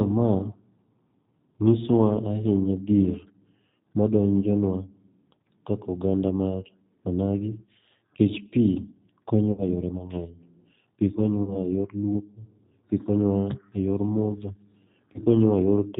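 Speech heard through the G.729 codec for its whole length, with plainly audible damage: everything above 4 kHz is gone, and the voice has a rough, slightly synthetic edge from being rebuilt out of a filter, a pitch predictor and a few pulses at 8 kbit/s. Unlike plain band-limiting, the texture itself sounds manufactured. VoIP packet loss concealed by the speech codec appears at 9.52–9.64 s, 11.43–11.59 s and 15.13–15.21 s. The decoder stretches the last sound into a fading buzzy tone or coloured noise and then recovers weakly. This fits roughly 60, 40 and 20 ms of lost audio, and it differs from a hard dropout, which would go silent.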